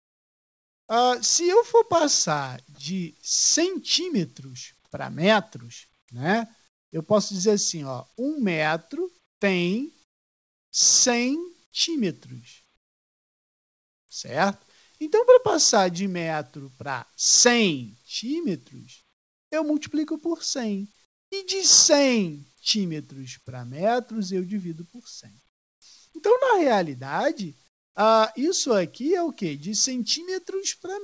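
The sender likely stopped transmitting in quiet gaps, so the receiver substituted comfort noise in place of the background at 0.0–0.89, 6.68–6.92, 9.26–10.73, 12.77–14.09, 19.13–19.52, 21.05–21.32, 25.49–25.82 and 27.68–27.95 s. Each time, the natural background gives way to a flat, featureless hiss, mostly about 18 to 23 dB quieter. Throughout the clip, nothing is heard above 8 kHz, which fits the G.722 call codec.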